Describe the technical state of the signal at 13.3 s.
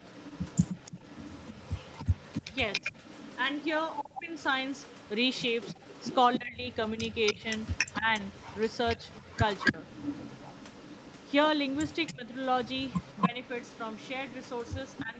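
Right at 13.3 s there's a short speech dip from double talk, running from 13.28 to 13.39 s. The speech drops by about 10 dB for roughly a tenth of a second, then comes back. The likely cause is the far end's echo canceller hearing both sides at once. It couldn't tell the local talker apart from its own loudspeaker echo, so it briefly turned everything down, and this talker gets squashed along with it.

Underneath that, and across the whole clip, there's an echo leak: a delayed copy of the speech trailing about 0.28 s behind, sitting well below the main level, roughly 15 dB down. That's likely a speakerphone on the other end whose echo canceller didn't strip out everything its microphone picked up from the loudspeaker, so the leftover got sent back. At 13.3 s it's still there as a faint ghost behind the dip.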